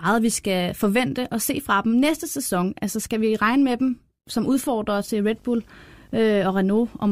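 A speech clip that, from 4.99 s to 7.11 s, picks up a 50 Hz buzz with hash above it and a thin 15.6 kHz whine, well below the voice: video or display buzz, from a screen or video cable coupling into the audio at the picture's field and line rates.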